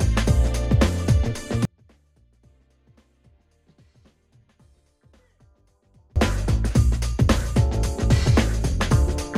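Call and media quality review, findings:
Audio dropout to a faint residue, 1.65 to 6.16 s (4.5 s). Sound cuts out abruptly mid-flow, leaving only a faint leak about 40 dB below normal level, then returns abruptly. The path stays live through the gap, likely a lost or muted upstream feed. Hard edges and a non-silent gap rule out a natural pause, fade or full mute.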